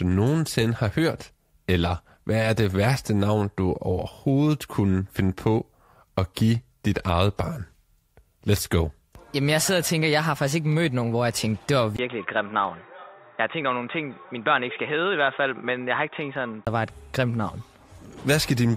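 Input switched to a poorer device, likely, at 11.97–16.67 s: after a 20 ms gap, sound turns dull and quieter, nothing above 3.8 kHz, with faint new noise.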